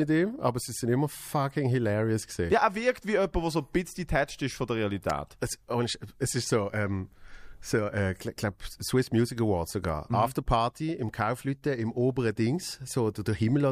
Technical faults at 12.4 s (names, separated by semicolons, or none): none